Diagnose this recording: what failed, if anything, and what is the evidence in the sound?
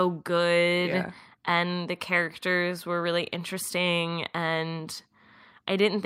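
Listening through the recording, nothing stood out that would point to a failure at any stage of the chain.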